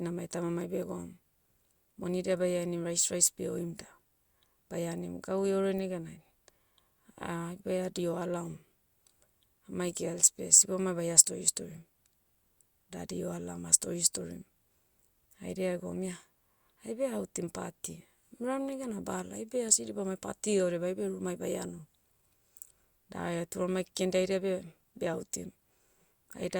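Listening to this speech recording, nothing stood out as a technical problem at any point.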